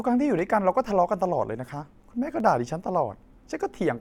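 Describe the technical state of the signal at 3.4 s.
Clock drift buffer slips span 0.39 to 3.40 s: a click every second, likely from two device clocks a few hundred ppm apart forcing small sample drops or repeats.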